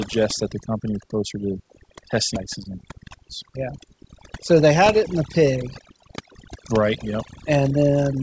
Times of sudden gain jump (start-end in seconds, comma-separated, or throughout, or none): none